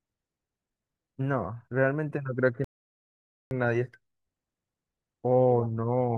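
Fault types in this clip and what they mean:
Rebuffering stall: the player exhausted its downloaded audio at 2.64 s and halted until more data arrived, leaving silence until 3.51 s. The speech then resumes exactly where it stopped, so no content is lost, but about 0.87 s of dead time is inserted.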